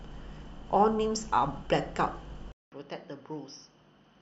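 At 2.52 s the speech cuts out for 200 ms, then returns about 10 dB quieter, duller, with nothing above 6.2 kHz and a faint new noise floor through the end. This is likely an input switched to a poorer device.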